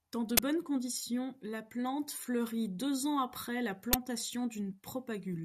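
At 0.37 to 0.40 s, just before "conditions la plante fleurit", a short, very loud blast of digital noise cuts into the speech. This is an uninitialised buffer: a block went to the output before any audio was written into it, so whatever stale memory it held was played as samples. The burst lasts about 21 ms, which fits a 1024-sample buffer. A second, shorter burst of the same kind comes at 3.93 s, right after "deux ans après la". At about 10 ms it fits a 512-sample buffer. What marks both as this fault is the raw noise filling exactly one buffer-length slot.

At 4.71 s a brief fault of about 14 ms is heard instead. This is damaged data in a compressed stream. Some of the encoded bytes there are wrong, so the decoder misreads the frame, loses its place and hunts for the next valid frame header before normal decoding resumes. It sounds different from the buffer bursts. Rather than a flat blast of garbage, it comes from a decoder turning corrupt frame data into sound.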